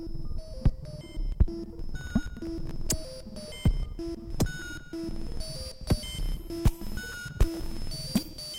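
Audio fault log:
2.01–2.71 s: processor overload crackle. The music tears into a gritty burst. The processor keeps missing deadlines for very short buffers, around a millisecond and a half. Each miss drops a sliver of silence with hard edges, and the fifteen or so gaps blur into crackle.
7.12–7.76 s: processor overload crackle. The same tearing returns, denser. The run of silent gaps points to more missed buffers, around twenty. The crackle stops as soon as the load eases.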